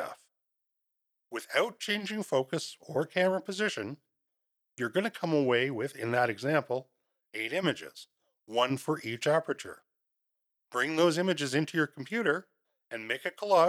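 Nothing in this speech recording trips up the ear; there's simply no technical fault to point to anywhere along the way.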